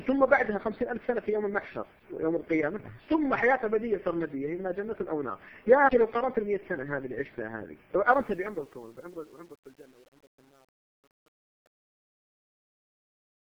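The fade-out starts at about 8 s, and from 8.11 s to the end at 13.41 s you get truncation distortion on the fade. The gain stage seems to keep only around 9 bits with no dither, so as the level sinks toward the smallest step the waveform collapses into coarse square steps. From 8.58 s onward it's at its worst, with the tail turning gritty.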